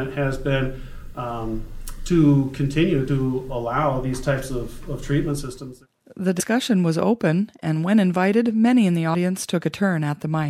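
At 3.07, 6.39 and 9.13 s the audio jumps ahead. Compressed frames were skipped: roughly two, four and three frames of about 26 ms, losing around 50, 100 and 70 ms.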